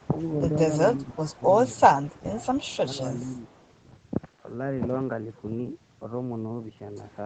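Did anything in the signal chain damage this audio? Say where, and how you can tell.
Yes. Echo leak at the call-processing stage, likely a far-end echo canceller letting loudspeaker pickup through: a faint copy 433 ms late, around 40 dB down, at 0.0–0.07, 1.32–1.36 and 3.33–3.59 s.

Speech suppressed in double talk, also call processing, likely the canceller ducking its own talker along with the loudspeaker echo during overlap: the speech dips by roughly 15 dB at 1.04–1.41, 2.07–2.17, 2.71–3.08 and 3.46–3.54 s.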